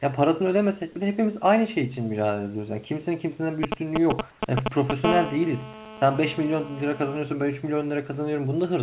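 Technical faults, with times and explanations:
3.63–5.06 s, GSM signalling bursts: A galloping dit-dit-dit of brief buzzes, somewhat louder than the speech, comes from a nearby 2G phone sending short groups of radio bursts while it signals to the network. The audio circuit rectifies those pulses into sound. On a spectrogram each group is a short vertical stack of lines spaced 217 Hz apart, up to the 4 kHz ceiling of the call path. The waveform shows clustered spiky packets.
4.31 s, comfort noise in place of the background: For about 90 ms the room's background is swapped for a smooth, featureless hiss about 2 dB quieter, likely the receiver filling a gap with synthetic noise after the sender's voice detector stopped transmission. The effect is a faint flattening of the ambience rather than a click. On a spectrogram the textured background gives way to a uniform, evenly shaded band, and the waveform's noise floor turns slightly lower and steadier.
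5.06–7.17 s, GSM phone buzz: The bursts settle into a continuous hard, raspy buzz at 217 Hz, about 8 dB below the speech. It comes from a phone now transmitting steadily in a call, pulsing 217 times a second, with the rectified pulses forming a tone rich in harmonics that has nothing to do with the speech. A spectrogram shows unbroken horizontal lines every 217 Hz across the band. The waveform carries a regular ripple under the speech.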